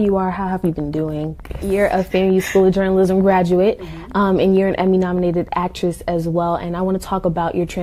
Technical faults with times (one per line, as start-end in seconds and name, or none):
0.05-5.49 train of clicks